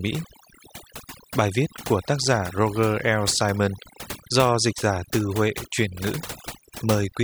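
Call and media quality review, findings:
Overdone noise removal, whole clip. Background drops, breaks up into twinkling specks. Noise suppressor set too aggressive, gating bands near its noise estimate, taking quiet speech detail too. Spectrogram: blank gaps, isolated flickering time-frequency dots, frayed harmonic edges.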